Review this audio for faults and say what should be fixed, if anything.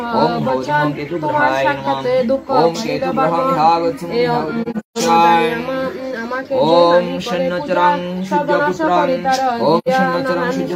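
Soft-edged dropouts at 4.62–4.98 s, with gaps scattered across about 340 ms and the longest around 150 ms, and at 9.78–9.88 s. This is AAC frame loss with muting: the decoder zeroed missing frames, and the overlapping windows faded sound out and back in. Protect the stream against packet loss with forward error correction or retransmission, or use decoder concealment instead of muting.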